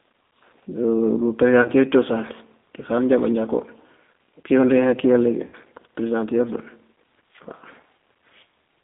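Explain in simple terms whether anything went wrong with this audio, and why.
The speech sounds thin, slightly rough and synthetic throughout, as if heard over a phone. That is the G.729 codec, which rebuilds the voice from a simplified model and drops everything above about 3.6 kHz.

Brief smeared blips occur at 1.62–1.70 s, 5.47–5.55 s and 7.97–8.00 s. These come from VoIP packet loss concealed by the speech codec: pieces of audio went missing and the decoder filled each gap by stretching the preceding sound.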